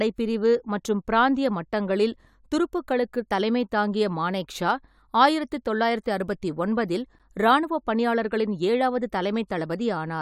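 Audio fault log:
7.19 s, gap between stream segments: a hard-edged 10 ms hole of silence in the speech where two segments' timestamps don't quite meet, with nothing actually dropped.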